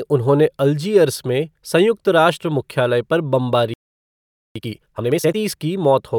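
At 3.74 s the speech cuts off mid-flow and the output stays silent until 4.56 s, a gap of about 0.82 s. This is a playback stall, likely the player running short of data or having its output thread blocked, so nothing reached the output until it recovered.

From 4.56 s to 5.36 s the speech comes back hurried, running at 2.0 times normal speed while keeping its normal pitch. This is time-compressed catch-up: the player trims its backlog by removing short slices and cross-fading across the joins.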